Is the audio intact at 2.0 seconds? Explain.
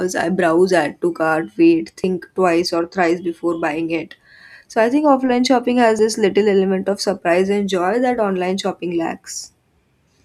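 No. At 2.04 s, between "add to cart wait" and "twice or thrice before", about 50 ms is skipped, likely audio missing between chunks. A waveform shows an abrupt splice with no gap, and a spectrogram shows a hard vertical edge.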